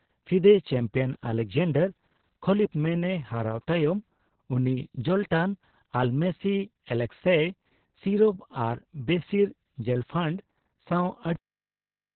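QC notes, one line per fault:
Throughout: Opus voice compression. The encoder is running in its SILK speech mode at a very low rate, which fits about 6 kbps, with long 60 ms frames and the band narrowed to narrowband, so nothing survives above about 4.4 kHz. The excitation is coded coarsely, so the speech comes across muffled and boxy, with a hoarse, slightly robotic edge from the heavy codec damage, and consonants lose their sharpness.
11.36 s to end: cut-off end. The final buffers were never written out, so playback stops abruptly at 11.36 s in the middle of the speech instead of letting the sound decay. The clip falls straight to digital silence for the remaining stretch of just under a second, with no fade or natural tail, which makes the ending sound chopped rather than finished.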